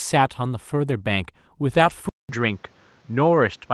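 At 0.89 to 0.91 s, and again from 1.73 to 1.91 s, there are two instances of a lost packet rebuilt from error correction. Audio went missing in transit, but each following packet carried a coarse, low-bitrate duplicate, so the decoder filled the hole instead of leaving silence. The first patch is a single 20 ms frame. The longer one sounds like a run of about five packets, with roughly 100 ms rebuilt. Both come through as brief grainy, noisy roughening of the speech with no dropout. On a waveform the envelope stays continuous. On a spectrogram the rebuilt stretches look smeared and hissier, and the upper bands thin out because the decoder is guessing at content the duplicate never carried.

From 2.09 s to the end, the sound changes character in a way that is likely an input switched to a poorer device, with the capture moving to a lesser microphone or a headset's call mode. The switch starts with a 200 ms silence, a flat gap in the waveform. 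After that the speech comes back at about the same loudness but duller, with nothing above 7.6 kHz. On a spectrogram this shows as a hard ceiling across the top, and a new steady noise floor sits well below the speech.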